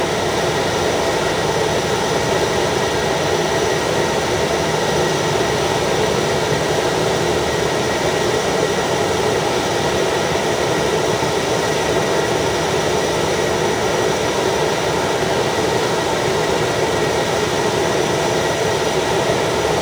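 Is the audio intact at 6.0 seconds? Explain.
No, not really. At 6.0 seconds, as everywhere in the clip, there's crude rate conversion. The pattern fits a drop from 48 kHz to 44.1 kHz done by simply skipping or repeating the nearest samples, with no filtering. That error recurs on a fixed cycle and creates shifted, inharmonic copies of the sound, sitting roughly 25 dB below it. You hear it as a gritty, inharmonic fizz that rides along with the louder and brighter parts.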